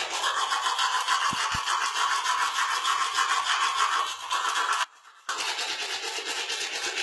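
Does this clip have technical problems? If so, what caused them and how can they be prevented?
Yes. HE-AAC compression runs throughout. The treble is likely rebuilt from copied lower bands, so high detail sounds gritty and metallic, with nothing above 11.8 kHz; the heavy damage fits a bitrate near 16 kbps. Encode at a higher bitrate, or use a codec that codes the full spectrum directly.

There is a loud pop from 1.33 to 1.57 s: two sharp pops rise a little above the sound, likely from a voltage step such as a plug, switch or static discharge. Secure connectors and switch equipment only while the channel is muted.

An audio dropout to a faint residue lasts 0.45 s, from 4.84 to 5.29 s. The sound cuts abruptly to a faint leak far below its normal level, likely because the signal was lost while the path stayed live. Check cables, wireless links and buffers so the feed stays continuous.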